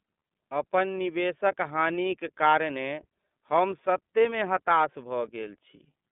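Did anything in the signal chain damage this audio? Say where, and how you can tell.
Yes. The damage happens at the codec stage, where the iLBC codec runs across the whole speech clip. The band is narrowband telephone, roughly 200 Hz to 3.5 kHz, with nothing above 3.7 kHz. The voice has a plainly audible rough, synthetic grain, because each 30 ms frame's excitation is coded on its own rather than predicted from the previous frame. That frame length fits the 13.33 kbps mode.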